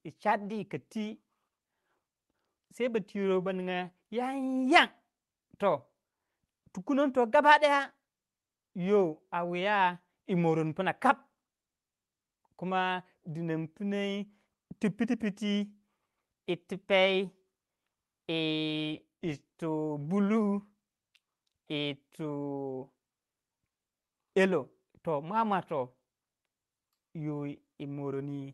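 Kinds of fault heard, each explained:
No technical faults can be heard in this speech recording, which carries the ordinary coding character and upper band limit expected of a normal call link.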